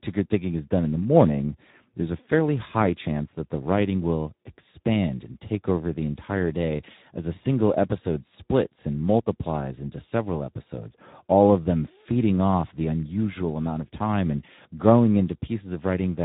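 From the start of the speech to its end, Speex codec damage is plainly audible. The voice sounds noisy and hoarse, which fits a low Speex setting of around 11 kbps. At that rate this CELP coder has too few bits to rebuild the excitation that drives its vocal-tract model. Unlike MP3 or AAC at low bitrates, there is no swirly, watery smearing or pre-echo on onsets. The roughness sits in the voice source itself, the signature of a speech-model codec.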